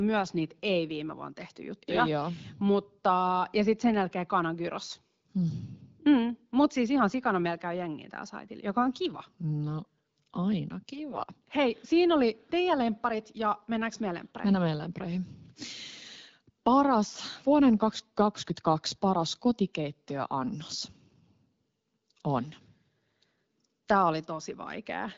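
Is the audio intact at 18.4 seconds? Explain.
Yes, the speech at 18.4 seconds is intact, carried cleanly through the AMR wideband (HD Voice) path at 12.65 kbit/s, a rate at which the codec keeps speech clear.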